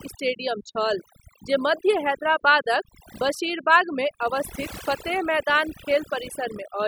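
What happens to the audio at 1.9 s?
At 1.9 s the speech is affected by overdone noise removal, which runs through the entire clip rather than starting or stopping there. The noise reduction is set too aggressively: individual frequency bands that sit close to its noise estimate are pulled far down or gated off entirely, taking the quieter components of the voice with them. As a result the background drops and breaks up into twinkling specks.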